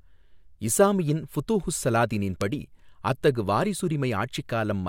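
Bit error spikes at 1.35 s and 2.41 s: a flipped bit makes the sample value leap by a power of two and snap straight back, giving a sharp broadband tick unrelated to the speech, reaching about -22 dBFS and then about -10 dBFS. The second, louder tick fits a short run of corrupted samples.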